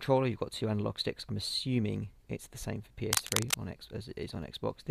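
From 3.12 to 3.54 s, cable scratch noise appears: a dense, irregular burst of scratching and rustling, roughly as loud as the sound itself. It is likely caused by a worn cable or connector being moved, its contact resistance fluctuating rapidly and injecting noise.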